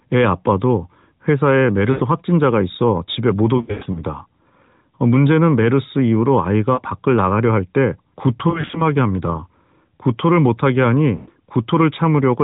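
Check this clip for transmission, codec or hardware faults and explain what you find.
Lost AMR speech frames affect the speech at five points; the AMR narrowband coding itself is audible only as the 4 kHz band limit with light buzziness.

Lost AMR speech frames occur at 1.92–2.03 s (80 ms lost), 3.58–4.02 s (220 ms scattered over 360 ms), 6.74–6.81 s (40 ms), 8.50–8.83 s (120 ms scattered over 240 ms) and 11.16–11.30 s (120 ms). Radio errors corrupt frames, so the decoder repeats the last good pitch and vocal-tract settings at falling gain. Short losses cause quick dips or warbles. The longer stretches smear sound and fade toward silence, and speech returns briefly weak or rough.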